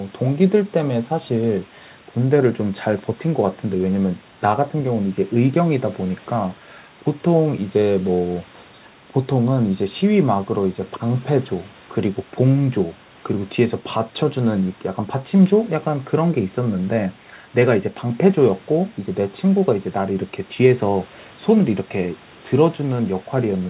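No faults are audible.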